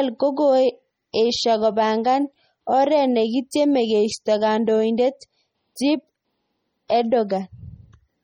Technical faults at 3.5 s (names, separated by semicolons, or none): MP3 compression; pre-echo